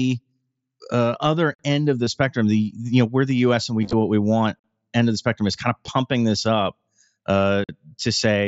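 A speech recording, carried over a wideband Bluetooth headset link whose mSBC coding shows only light graininess, with two faults. A gap between chunks opens at 1.55, 4.59 and 7.64 s: hard-edged silent holes of about 48 ms, spaced about 3 s apart, which fits audio delivered in 3-second chunks with a late start on each. Concealed Bluetooth headset packet loss is different: rather than falling silent, the sound is continued with a repeat of the preceding waveform. It appears briefly at 2.05 s, after "other end of the", and at 5.86 s, after "spectrum is kind of", each about 15 ms, which fits two lost frames. A scattered stretch from 3.82 to 3.93 s, between "and we" and "what we want", loses nine frames, about 68 ms in all.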